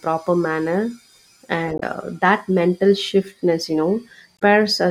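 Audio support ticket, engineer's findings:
Damaged data in compressed stream: short glitches at 1.77–1.83 s (just before "that mental") and 4.36–4.42 s. Decoder misreads corrupt frames, resyncs on next header.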